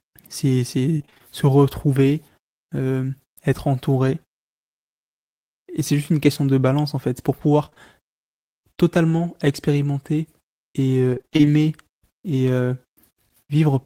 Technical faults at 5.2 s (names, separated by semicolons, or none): none